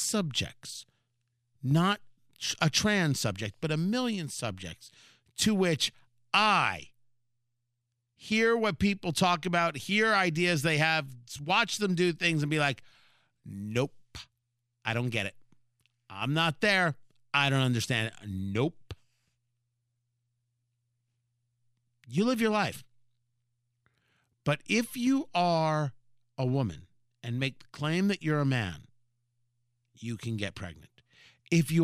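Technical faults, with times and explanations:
No technical faults can be heard in this speech recording. There is nothing here that needs a time or an explanation.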